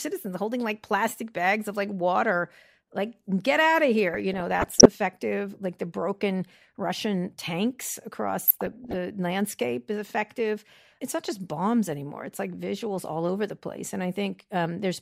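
A speech clip with DAB burbling: weak reception lets bit errors into the MP2 data, so wrong samples put short noise blips into single sub-bands at 4.11–4.86 s after "like get out of" and 8.46–8.95 s after "the broken russian tanks".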